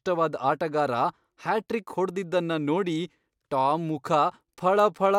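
Nothing stands out as technically wrong in this short bit of speech; there's no fault to point to anywhere in it.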